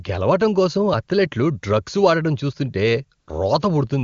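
A short speech clip over what sounds like a high-rate HD Voice (AMR-WB) link, with one AMR comfort noise gap: right after "అథ్లెట్లు డ్రగ్స్ వాడటం చూస్తుంటే", from 3.19 to 3.27 s, the phone stopped sending speech frames for about 80 ms. The real background drops out and is replaced by a smooth, steady synthetic hiss.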